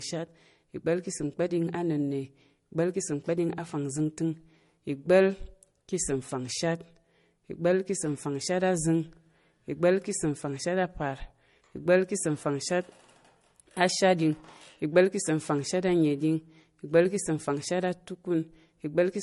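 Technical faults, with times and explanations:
throughout, transcoding between lossy codecs: the speech was likely encoded twice, at rates that fit roughly 47 kbit/s MP3 then 48 kbit/s AAC-LC. The second encoder wastes bits re-coding the first one's smearing, stacking both artefact types, and nothing remains above 11.2 kHz.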